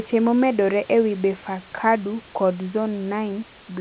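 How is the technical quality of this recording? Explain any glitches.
The technical quality of this recording holds up, and there are no glitches to explain.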